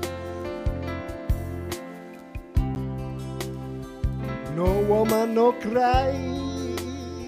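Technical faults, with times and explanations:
2.75 s, block of digital silence: the signal drops to silence for 10 ms and then resumes, with no fade on either side. The waveform jumps abruptly from its running level to nothing and back again, so each edge produces a discontinuity, and the two sit close enough to merge into a single tick rather than an audible gap. A hole this short and clean points to an output buffer that was not filled in time.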